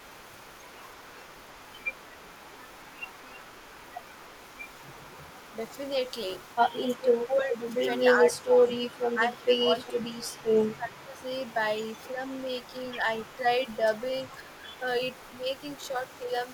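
From 0.0 to 7.75 s there is an echo leak. A faint delayed copy of the speech trails it by 336 ms, very low, some 35 dB down. A loudspeaker echo likely slipped past the far end's echo canceller and came back.

Speech suppressed in double talk runs from 6.72 to 11.23 s. The speech dips for about three seconds in total, by up to roughly 15 dB. Both sides likely talked at once, and the canceller turned down both its own talker and the echo.

The echo leak returns from 8.36 to 16.3 s, with the same 336 ms delay at the same faint level.

Two short suppression dips follow. The one at 14.63 to 14.77 s is shallow, around 5 dB. The one at 15.78 to 16.28 s is deeper, around 10 dB.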